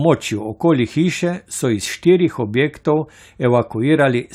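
No technical faults can be heard anywhere in the speech.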